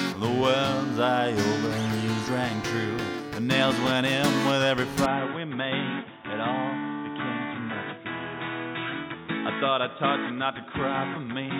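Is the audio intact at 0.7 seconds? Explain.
Yes, the audio is intact at 0.7 seconds, with no fault at that point.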